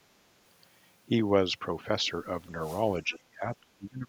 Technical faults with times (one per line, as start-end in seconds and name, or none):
2.61-2.83 wireless microphone noise hit
3.03-4.08 speech suppressed in double talk
3.13-3.17 other side's voice leaking through